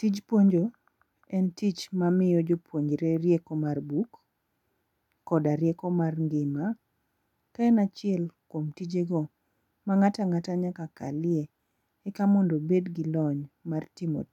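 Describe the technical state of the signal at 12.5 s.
Around 12.5 s the speech signal is intact, with no audible technical fault at that point.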